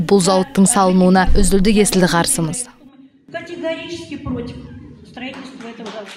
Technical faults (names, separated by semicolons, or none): zipper noise